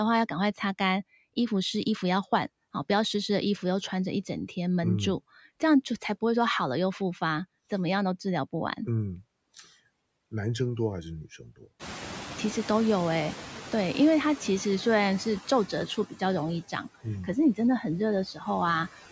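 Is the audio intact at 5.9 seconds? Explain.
No. A noise suppressor runs throughout the clip, including at 5.9 s, cutting each band it judges to be steady noise by about 17 dB, frame by frame. The noise floor sinks between the speech and swells back beneath it.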